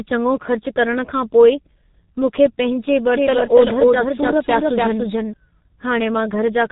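From start to finish the speech carries the sound of the G.723.1 codec, heavily damaged. Nothing reaches above 3.8 kHz, so a spectrogram shows a flat ceiling with empty space above it, and the band below looks smeared in steps of about 30 ms. The coder rebuilds the voice from a slowly updated model at a very low rate, consistent with roughly 6 kbit/s, which leaves the speech muffled and hoarse and blurs its consonants.

Right after "मूंखे पंहिंजे", from 3.13 s to 5.33 s, a doubled audio track appears. A second full-band copy of the same speech runs about a third of a second behind and at nearly the same loudness, with no decay or room colour, so every syllable returns as a flat repeat. The waveform shows each burst mirrored a fixed distance later, and the copy starts and stops abruptly at both edges. The likely cause is the same signal being captured again along a slower path.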